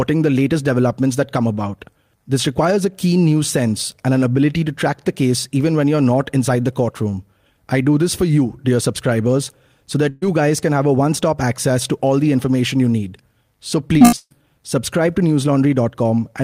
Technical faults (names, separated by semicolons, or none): burst of packet loss; repeated packet loss (robotic sound)